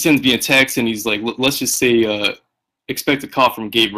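A short speech recording with two problems running the whole way through. There's hard clipping: the level hits the ceiling by about 11 dB, so peaks get sliced flat. Only a small fraction of the waveform actually goes over, but those flattened tops throw off high harmonics, giving a gritty crackle on the louder syllables. On top of that, the Speex codec damage is plainly audible, with the speech coded at around 22 kbps. Nothing survives above about 15.3 kHz, and the upper band has that thin, synthetic fill instead of real detail.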